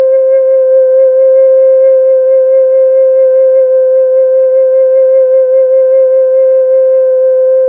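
No technical faults are audible.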